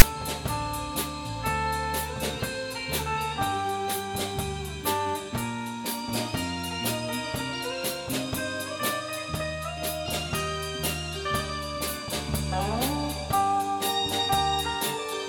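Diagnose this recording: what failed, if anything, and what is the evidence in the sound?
The failure is at the storage and playback stage: file tags played as audio. At 0.0 s there is a very brief, loud rasp with hard edges, offset to one side. A block of text tags at the start of the file was decoded as if it were samples.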